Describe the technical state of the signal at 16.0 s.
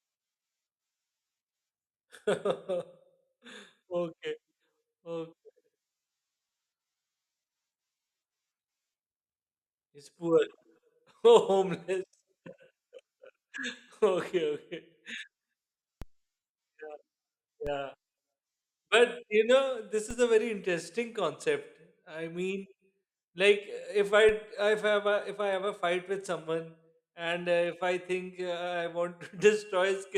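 A single low thump lands at 16.02 s while the speech carries on unchanged. This is a DC step: the waveform's zero line jumps by about -28 dBFS, and the offset then decays away as a 20 Hz high-pass filter pulls it back toward centre.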